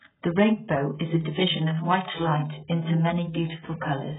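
Speech, heavily damaged by what is likely AAC compression throughout. Nothing survives above 3.8 kHz. The sound is dull, smeared and warbling, consistent with a very low bitrate around 8 kbps.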